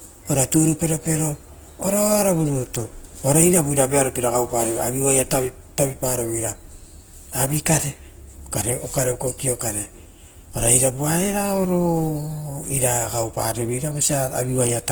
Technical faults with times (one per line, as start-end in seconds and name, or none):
0.00-14.91 Opus compression